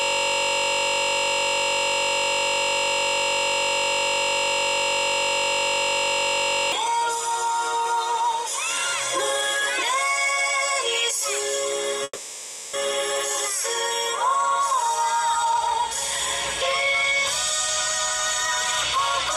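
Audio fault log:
0.00–6.72 s, system hang loop: a steady buzz at 46.9 Hz, already running when the clip begins. One 21.33 ms piece of audio repeats exactly, over three hundred times, which fits a 1024-sample ring buffer cycling while the system was frozen.
12.03–12.75 s, call audio freeze: the last sound is held as a fading buzz for 0.7 s, with a brief moment of near-silence, then resumes where it stopped. Nothing is lost, but everything after arrives 0.7 s later. The likely cause is delayed packets emptying the jitter buffer.
15.45–15.78 s, jitter buffer speed-up: the audio turns hurried, running at 117% speed with its pitch unchanged. The receiver, holding too much buffered audio, cut out short pitch-period pieces repeatedly, around 70 ms in total, to reduce the delay.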